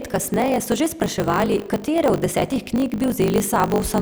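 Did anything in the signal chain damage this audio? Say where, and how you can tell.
Yes: a block size mismatch (truncated) at the buffer stage trims each block's tail, which fits 1024-sample writes, leaving a 50 Hz buzz throughout and speech running 1.16 times fast at near-normal pitch.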